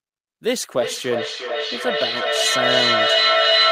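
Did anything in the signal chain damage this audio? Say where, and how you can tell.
Yes. From 0.77 s to the end of the clip, a feedback echo between two devices on the same call damages the audio. The sound returns at a steady interval of roughly 0.4 s, each return thinner and more ringing. The repeats build to about 6 dB above the speech instead of fading, which shows a sustaining loop. One device plays the other's microphone feed into a shared room, and neither echo canceller removes sound it did not itself play. Room reverberation would decay smoothly rather than repeat at fixed intervals.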